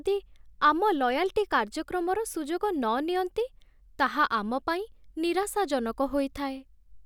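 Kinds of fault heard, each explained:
Nothing stood out on listening to this recording.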